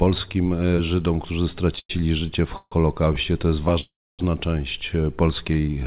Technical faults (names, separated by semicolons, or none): call audio freeze